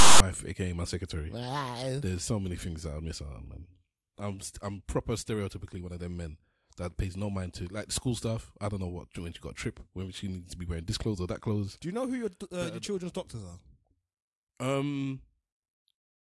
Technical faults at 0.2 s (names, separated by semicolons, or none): file tags played as audio